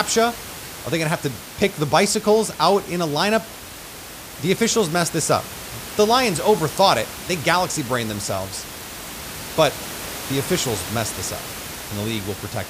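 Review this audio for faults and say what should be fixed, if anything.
Nothing needs fixing; no faults are present in this audio.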